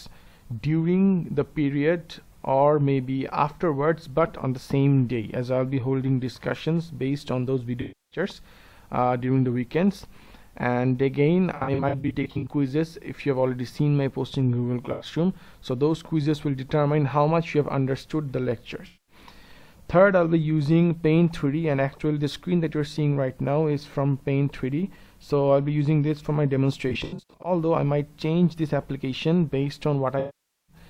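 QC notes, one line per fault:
7.81–8.19 s, 11.57–12.50 s, 14.92 s–15.06 s, 18.86–19.15 s, 26.89–27.52 s, 30.19–30.76 s: AAC frame loss with concealment. The decoder rebuilds missing frames from the last good spectrum, so each gap turns smeared, noisy or phasey. The 11.57 s and 26.89 s stretches are scattered dropouts.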